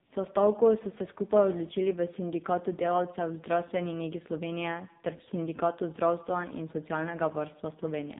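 From start to finish the speech carries AMR narrowband mobile codec damage, and it is heavy. Nothing above 4 kHz survives, and each 20 ms frame is rebuilt from a vocal-tract model fed by a few pulses, so the voice turns buzzy and synthetic, which fits a low AMR-NB mode around 5.9 kbps. A plain telephone band-limit would sound muffled but still natural. This one sounds machine-made.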